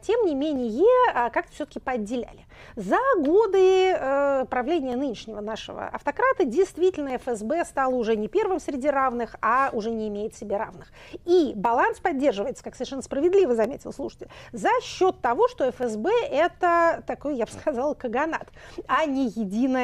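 A click or pop recurs at a steady 2.18 s interval from 0.56 s to 18.01 s, about ten times in all. The regular spacing points to clock drift buffer slips, likely from two devices running on separate clocks that disagree by something on the order of 150 ppm. The buffer between them gradually fills or drains until a short block, roughly fifteen samples, is dropped or repeated, leaving a brief discontinuity in the waveform.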